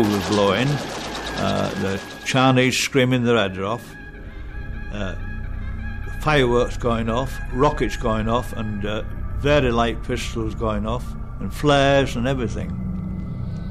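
No technical faults can be heard anywhere in this audio. Nothing in it points to a problem in how the sound was captured, processed or delivered.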